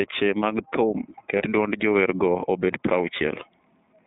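The whole clip carries the sound of the iLBC codec. The speech sits in a narrow telephone band, roughly 150 Hz up to 3.7 kHz, so there's no air or sibilant sparkle on top. The coding damage is plainly audible: a slightly rough, synthetic edge that comes from each frame's excitation being coded on its own. The texture fits iLBC's 30 ms frame mode at around 13.33 kbps.

From 1.38 to 1.43 s there's a brief spot of lost iLBC frames. The gap is short enough to match a single missing 30 ms frame. The decoder covers it by repeating the last pitch cycle with some noise mixed in, so you hear a moment of held, faintly buzzy vowel instead of a dropout. Since iLBC frames don't depend on their predecessors, the speech snaps back to normal right after.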